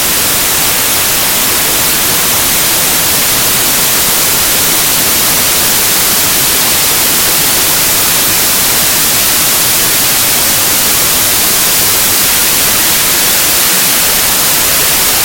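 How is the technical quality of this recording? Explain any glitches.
The technical quality is very poor. The samples are built from the wrong bytes for the entire clip, from start to finish. The reader assembles each sample from misaligned or swapped bytes, so the rapidly fluctuating low-order bits end up as the most significant part of each value. What reaches the ear is loud, harsh broadband noise, close to white on loud sounds.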